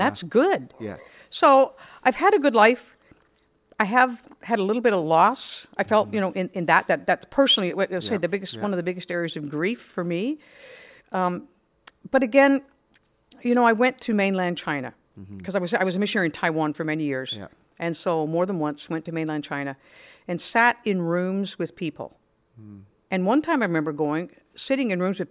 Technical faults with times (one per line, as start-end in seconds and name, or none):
none